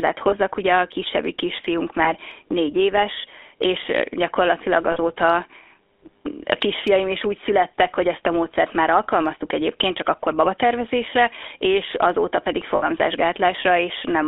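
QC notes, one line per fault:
Throughout: GSM full-rate codec. Speech is confined to 300 Hz–3.5 kHz with a gravelly buzz from pulse-driven excitation, which fits 13 kbps GSM, not a clean band-limited phone line.
0.30–0.34 s, 2.04–2.12 s, 4.92–4.98 s, 12.76–12.88 s: lost GSM frames. 20, 20, 40 and 60 ms of speech hold as a metallic ring from repeated frames, not silent dropouts.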